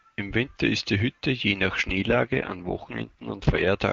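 At 1.89 s, just after "je nach", an AMR rate drop sets in: the link forces the wideband codec down from its clear top rate, which fits 23.85 kbit/s, to what sounds like 6.6 kbit/s. Until 3.68 s the speech turns rough, raspy and synthetic, with no gap and no loss of bandwidth.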